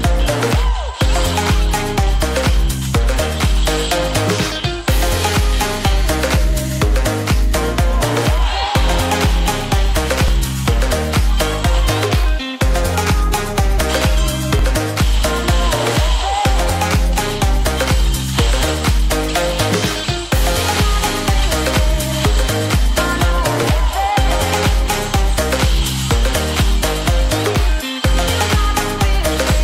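At 10.28 s the sound jumps forward with no gap. The same thing happens at 13.78 s and again at 14.59 s. Each is a dropped buffer, likely an overrun. The hardware overwrote a block of samples before the program read them. The audio on either side was spliced together. About 10 ms is missing at the first and third points. About 20 ms is gone at the second.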